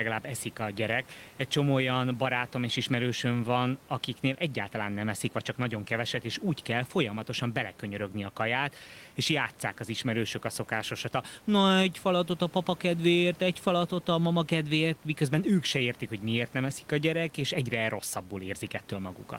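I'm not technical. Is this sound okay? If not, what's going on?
Yes, nothing has gone wrong with the signal. The faint background noise of the room sits well beneath the speech and is simply part of where the recording was made.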